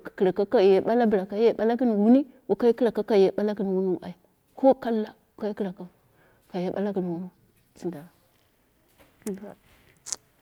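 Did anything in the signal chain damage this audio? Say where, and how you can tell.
No, nothing in the chain damaged this speech.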